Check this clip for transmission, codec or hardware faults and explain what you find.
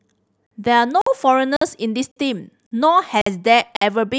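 The speech is interrupted by a regular transmission fault, a gap between chunks, seven times.

Gap between chunks at 0.46, 1.01, 1.56, 2.11, 2.66, 3.21 and 3.76 s: 50 ms holes after every 0.5 s chunk, as if each block started late. They sound like sharp-edged dropouts. On a waveform they appear as flat, abruptly cut gaps, and on a spectrogram as evenly spaced blank vertical stripes.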